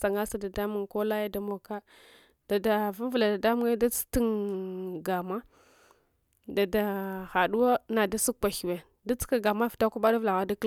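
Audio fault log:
There is no fault in this speech audio.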